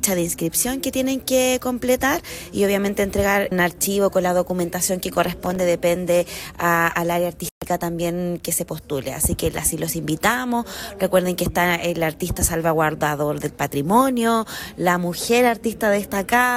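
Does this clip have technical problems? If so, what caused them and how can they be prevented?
Yes. Processor overload crackle from 5.14 to 5.60 s: the processor missed a run of tiny buffer deadlines, leaving short silent gaps heard as gritty crackle. Reduce processing load or enlarge the buffer to prevent it.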